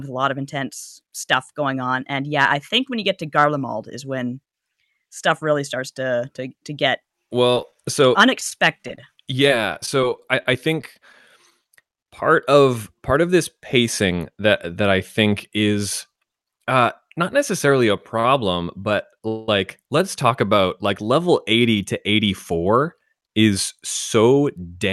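Repeated packet loss with a robotic sound hits this speech recording at 7.51 to 7.76 s and again at 11.50 to 11.99 s. In the first burst five quick dropouts, the longest about 14 ms, are each papered over by extending the preceding sound, so roughly a fifth of that quarter-second is synthetic fill and about 20 ms of real audio is gone. The second burst has four holes of up to 10 ms and loses about 40 ms, giving the same choppy, robotic texture. Between them, scattered short gaps run from 8.4 to 11.14 s: around twenty isolated losses, none much over 15 ms, each patched the same way, for about 200 ms of fill in total and about 190 ms of missing material. The speech stays mostly intelligible here but carries small ticks, smears and hiccups. At 18.20 to 18.25 s a short stall from a late packet occurs. The jitter buffer ran dry, and the last sound was held for 44 ms until the data arrived. Playback then resumed where it had stopped, so nothing is lost, but that moment is audibly prolonged with a slight buzz or dip. 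From 19.28 to 19.49 s a call audio freeze stretches the sound for about 200 ms as a fading buzz or hiss, never reaching silence. Then the audio picks up without skipping, most likely because packets were held up in transit. The band-limiting near 12 kHz fits Opus coding at around 64 kbps.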